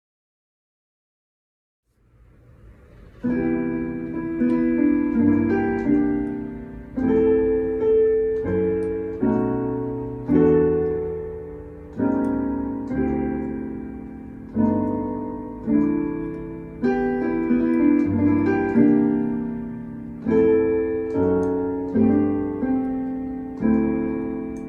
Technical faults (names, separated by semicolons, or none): none